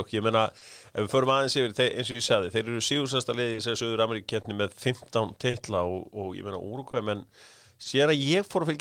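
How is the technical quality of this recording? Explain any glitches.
The speech carries a recurring timing fault, with seven brief hitches spread through the clip.

Clock drift between sender and receiver runs the whole length. The delivery has a slightly uneven, catch-and-release pace. The sending side's clock runs slow by roughly two percent, so samples arrive a little slower than the receiver plays them out. The jitter buffer keeps draining, and each time it runs low the receiver has to pause and wait, which produces the hiccups below.

Short stalls from a late packet land at 0.58, 2.11, 3.52, 4.42, 5.50, 6.91 and 7.83 s. Each time, the sound hangs for an instant with a faint buzzy or flattened quality, then carries on with nothing skipped. The stalls at 0.58, 2.11 and 5.50 s are held about 30 ms and the others about 20 ms. The buffer emptied because the next packet wasn't there in time, so the receiver stretched the last bit of audio until it arrived.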